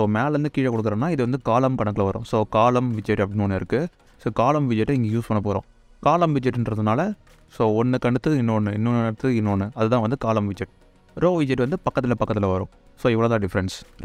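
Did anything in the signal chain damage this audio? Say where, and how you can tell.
No, nothing along the chain seems to have done any harm here; I can't hear anything in the audio that would point back to a damaged stage.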